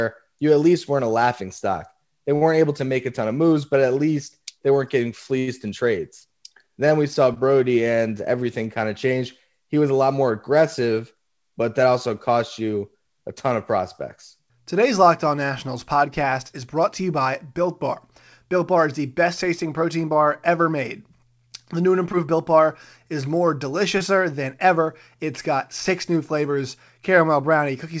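Brief smears or wobbles break the speech at 7.34 s, between "we saw" and "and everything kind of", at 16.48 s, at 22.12 s after "new and", and at 23.98 s, between "is more" and "than ever". Each is short concealed packet loss: about 20 ms of audio arrived too late, and the receiver filled the gap by extending the preceding sound before blending back. The band stops at 8 kHz, as expected from a G.722 call path.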